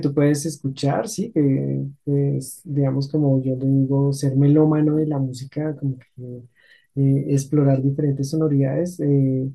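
A short piece of speech, and there's nothing technically wrong with it that I can hear.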